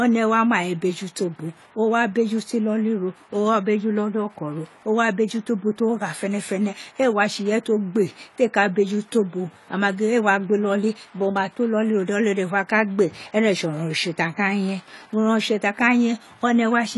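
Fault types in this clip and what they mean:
AAC compression: the speech sounds dull and smeared all the way through, with nothing above 11.5 kHz and a warbly, fizzy edge on sibilants. That's likely AAC-LC quantising its frequency lines too coarsely, which fits a low bitrate of around 32 kbps.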